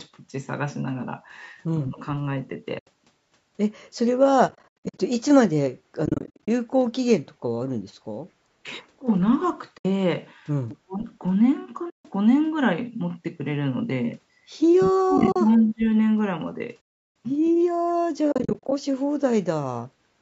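At 1.77 to 2.0 s the speech dips by about 15 dB. This is speech suppressed in double talk. Both ends were likely talking at once. The echo canceller could not tell the near talker from the loudspeaker echo, so it pulled both down. Right after, at 1.99 to 2.06 s, a faint echo leak appears. A copy of the speech returns about 189 ms late, at about 30 dB below it. The loudspeaker side's canceller likely let some of its loudspeaker pickup through.

At 2.79 to 2.87 s a soft hole opens for 80 ms. This is AAC frame loss with muting. The decoder zeroed the missing frames, and the overlapping windows fade the sound out and back in. The gap sizes fit 10 ms frames. Scattered losses follow at 4.49 to 4.99 s, about 300 ms in total with runs up to roughly 100 ms. More come at 6.06 to 6.48 s, 280 ms in short runs.

At 8.42 to 8.66 s the speech is ducked again, by about 35 dB. A solid gap follows at 9.78 to 9.85 s. 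At 10.69 to 10.77 s a stronger echo returns, about 205 ms late and only about 20 dB down. Then 10.83 to 11.04 s drops by about 40 dB. Another gap of 150 ms falls at 11.90 to 12.05 s.

The longest suppression runs from 14.83 to 15.86 s, about a second, down by about 35 dB. Scattered frame losses sit inside it, at 15.18 to 15.36 s. Later holes come at 16.82 to 17.07 s, 350 ms with no break, and at 18.32 to 18.72 s in short runs.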